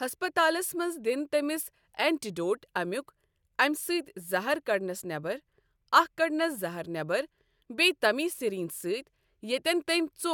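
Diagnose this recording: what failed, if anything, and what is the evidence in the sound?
Nothing failed here as far as the ear can tell: the speech runs along without any break, glitch or damage that would point to a problem at any stage of the chain.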